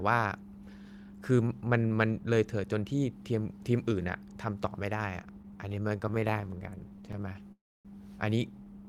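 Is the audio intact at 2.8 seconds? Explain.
Yes, the audio is intact at 2.8 seconds, with no audible fault at that moment.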